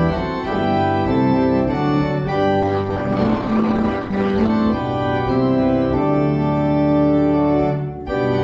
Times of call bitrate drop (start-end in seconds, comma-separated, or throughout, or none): 2.63-4.56